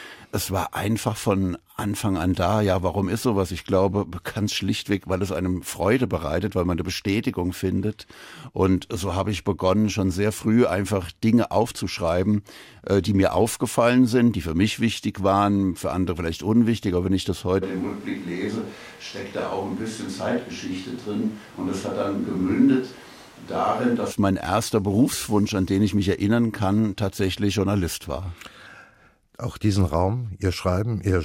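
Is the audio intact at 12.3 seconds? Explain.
Yes, the audio is intact at 12.3 seconds, with no audible fault at that moment.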